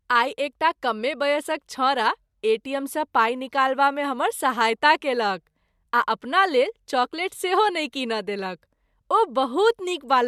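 No technical faults can be heard anywhere in this speech recording. There is nothing to mark at any point along its timeline.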